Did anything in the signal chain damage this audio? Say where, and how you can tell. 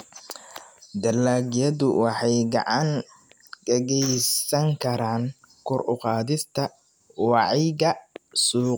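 No, nothing in the signal chain stood out as having damaged this speech on listening.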